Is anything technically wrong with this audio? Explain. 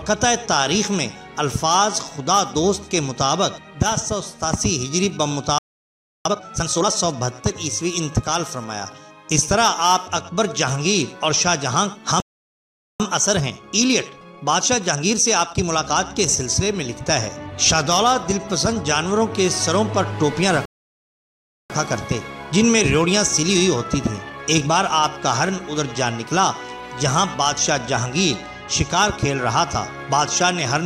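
Yes. There are three playback stalls, each followed by time-compressed catch-up.

Playback stall: the sound drops to silence mid-flow at 5.58 s for about 0.67 s, at 12.20 s for about 0.80 s, and at 20.65 s for about 1.04 s, then resumes. The player likely ran out of buffered data or had its output thread blocked.

Time-compressed catch-up: after each gap the audio is hurried at unchanged pitch. This runs from 6.25 to 6.91 s at 2× speed, from 13.00 to 16.00 s at 1.15×, and from 21.70 to 24.70 s at 1.1×. The player is trimming its backlog by cutting small pieces and cross-fading across the joins.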